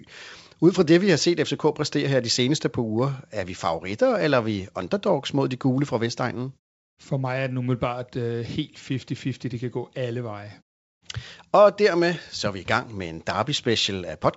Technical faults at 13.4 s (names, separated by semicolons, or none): none